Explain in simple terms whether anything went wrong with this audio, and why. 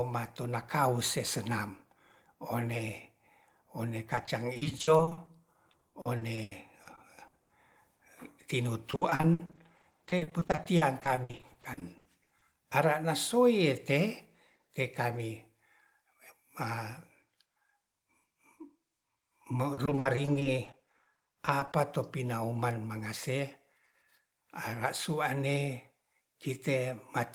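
The speech turns choppy and robotic from 4.15 to 5.29 s, 5.71 to 7.51 s, 8.91 to 12.43 s and 19.73 to 21.75 s. This is repeated packet loss: small chunks of up to 80 ms kept vanishing, and each gap was patched by stretching the sound just before it.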